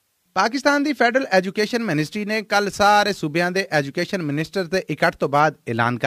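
From 1.37 s to 5.40 s the audio carries a crude rate conversion: a gritty, inharmonic fizz rides on top of the sound, strongest on loud and bright passages and sitting around 25 dB below the signal. It comes from changing the rate, which fits a 44.1 kHz to 48 kHz step, by repeating samples with no filtering. The repeats fall in a fixed cycle, adding shifted, inharmonic copies of the material.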